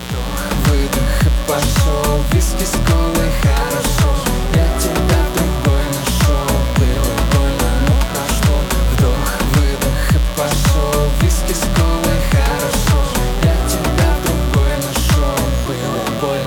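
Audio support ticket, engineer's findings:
Mains buzz, full length of clip. Steady raspy buzz, roughly 15 dB below the signal. Spikes at twice the 60 Hz mains rate, from a dimmer, rectifier or unshielded cable. Spectrogram: fixed horizontal lines at 60 Hz multiples into several kHz. Waveform: regular 120 Hz spike train in gaps.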